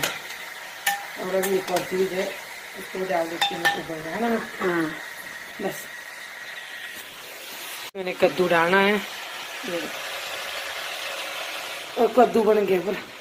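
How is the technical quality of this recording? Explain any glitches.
Listening closely to the recording, nothing stood out as a technical problem, and there are no glitches to explain.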